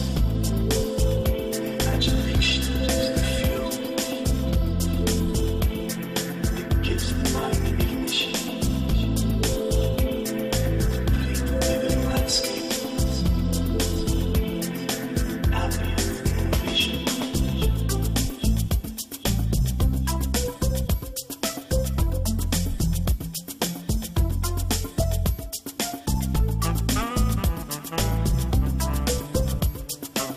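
Nothing here stands out as a fault; the audio runs along without any glitch, dropout or odd jump catching the ear at any point.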